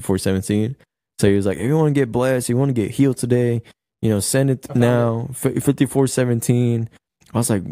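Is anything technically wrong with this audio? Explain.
No, nothing technically wrong can be heard in this speech recording at any point.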